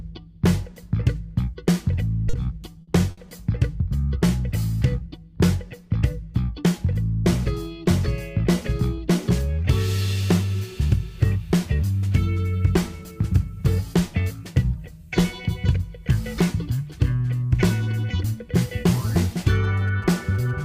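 At 2.29 to 2.36 s a short stall from a late packet holds the sound for about 40 ms. The jitter buffer ran dry, so the receiver stretched the last fragment, giving a brief buzzy sustain, then resumed exactly where it left off with nothing lost.

From 2.81 to 2.90 s a burst of packet loss removes about 60 ms of audio. The receiver concealed the gap by extending and fading the preceding sound for 60 ms, then jumped ahead, with the audio in between missing.

A second short stall from a late packet follows at 3.11 to 3.20 s, this time a 60 ms hold while the buffer waited for the delayed packet. Playback then continued seamlessly, though the sound is audibly drawn out.

From 19.41 s to the end, GSM signalling bursts appear, about 25 dB below the main sound. A nearby phone's radio bursts were rectified by the audio circuitry, producing a galloping ticking pattern with short buzzes at the 217 Hz burst rate.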